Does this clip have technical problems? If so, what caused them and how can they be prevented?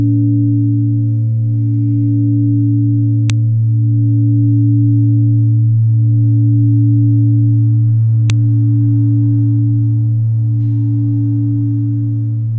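Yes. There are two sharp, loud clicks, at 3.30 s and 8.30 s. Each lasts only a millisecond or two. They are exactly 5.0 s apart, which points to the audio being assembled from 5-second pieces. This is a file header played as audio. Each piece seems to carry its own WAV header, and nothing strips it before joining. Those header bytes are read as sample values, so they snap out regardless of the surrounding sound. To prevent it, parse each WAV piece and append only its data section when concatenating or streaming.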